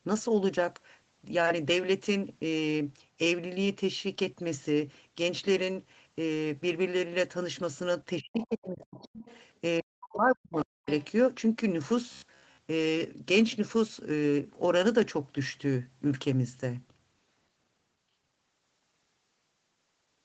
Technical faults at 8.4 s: speech suppressed in double talk; other side's voice leaking through

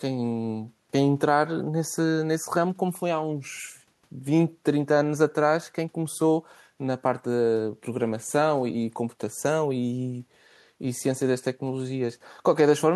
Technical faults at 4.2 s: none

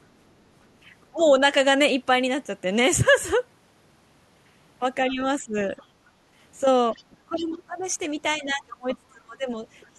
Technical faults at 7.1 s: other side's voice leaking through; speech suppressed in double talk

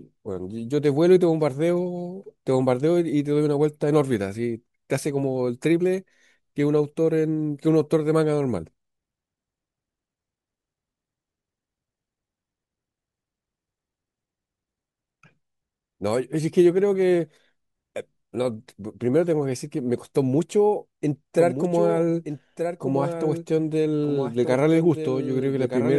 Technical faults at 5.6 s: none

